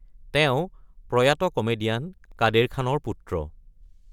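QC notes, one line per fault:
2.18 to 2.40 s, processor overload crackle: a burst of gritty crackle rides on the speech for about 0.22 s, then stops. The processor fell behind and missed several buffer deadlines in a row. Each miss left a tiny hole of silence with hard edges. The clicks are very close together, which points to buffers well under a millisecond long. A handful of these dropouts in quick succession fuse into one short, tearing rasp.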